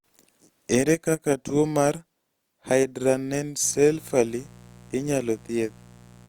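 Mains buzz enters at 3.61 s and continues to the end at 6.29 s. Sharp switching spikes leak into the signal twice per 60 Hz cycle, stacking harmonics up into the kilohertz range. It is heard as a steady, raspy buzz roughly 25 dB below the speech.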